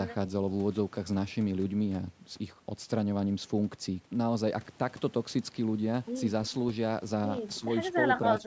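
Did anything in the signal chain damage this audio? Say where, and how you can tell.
Yes. At the call-processing stage, the speech dips briefly from 7.60 to 7.65 s by a few decibels, then more deeply, around 10 dB, from 8.41 to 8.47 s. This is speech suppressed in double talk, likely caused by the echo canceller mistaking overlapping near-end speech for echo and attenuating it.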